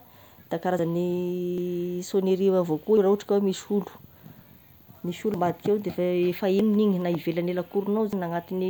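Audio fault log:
0.79, 1.58, 2.97, 4.41, 5.34, 6.60 and 8.13 s: dropped buffer (overrun). Each time the speech jumps ahead with no gap, losing roughly 50 to 150 ms, as before "rah ohatry ka". The recorder likely missed its buffer before the hardware overwrote it.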